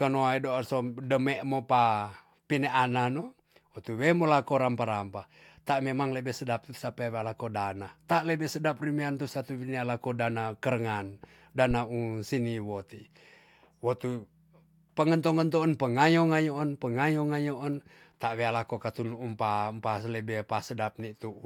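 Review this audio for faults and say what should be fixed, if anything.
A deep, dull thump lands right after "dana kerengan" in this speech, from 11.71 to 11.77 s, peaking at about -21 dBFS and dying away within roughly 13 ms. This is a phantom power thump: the supply was switched on or off on a live input, and the sudden voltage step passed through the coupling capacitors as a low-frequency pulse. To prevent it, mute the channel or pull the fader down before toggling phantom power.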